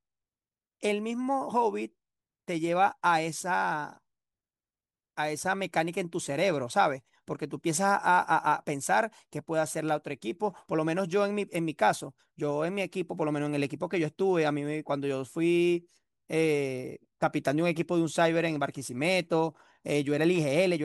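Nothing in the speech recording points to a technical problem: no interruptions, level faults or signal damage can be heard anywhere along it.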